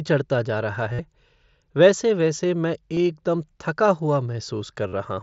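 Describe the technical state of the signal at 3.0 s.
Just before 3.0 s, from 2.94 to 2.97 s, there is concealed Bluetooth headset packet loss lasting 30 ms. The receiver filled the gap by repeating the closest-matching recent stretch of the mSBC speech waveform, producing a brief full-level buzz with a slight warble where the real signal resumes.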